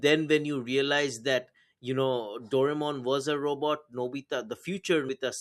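At 5.09 s the speech jumps ahead about 200 ms, two skipped compressed frames of 92.9 ms each.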